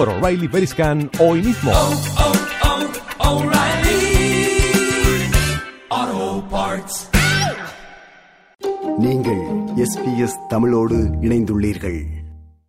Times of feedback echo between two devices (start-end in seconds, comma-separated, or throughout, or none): none